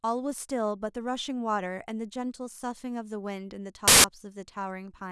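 A speech recording broken at 3.88 s by a sudden burst of very loud white static with hard edges, lasting about 0.16 s until 4.04 s. This is file tags played as audio: compressed data from an embedded cover picture is read as samples.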